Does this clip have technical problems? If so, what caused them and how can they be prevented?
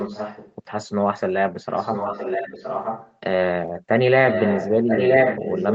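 Yes. There is an echo leak at 0 to 0.55 s, 1.54 to 3.15 s and 4.29 to 5.75 s: a copy of the speech trails it by 0.97 s. It rises from about 10 dB below the speech to about equal level. This is likely the far end's loudspeaker audio getting past its echo canceller. A spectrogram would show duplicate harmonic patterns shifted right. Using a headset or a better-tuned echo canceller would prevent it.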